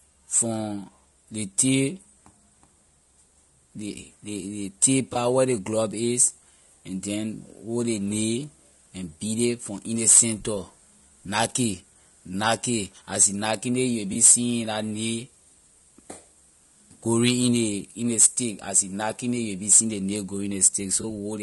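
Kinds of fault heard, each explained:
Low-delay AAC compression: The whole clip has a rough, grainy quality, with noise creeping in between the harmonics of the speech and a top end that sounds thinned and a bit synthetic. That points to a codec built for short frames, which can't resolve pitch detail finely, and the damage is plainly audible here. It's likely AAC-ELD, the low-delay flavour used for video calls, and the coarseness fits a bitrate somewhere around 32 kbps.
AAC frame loss with concealment: There are three brief glitches, at 5.13 s, 14.13 s and 21.01 s, each about 30 ms long. At each one a chunk of the signal went missing and the decoder patched the gap by reusing the last good spectrum, so instead of a dropout you get a short smeared, noisy or slightly phasey blip. Each gap matches roughly 20 ms of lost audio, which fits a single dropped frame.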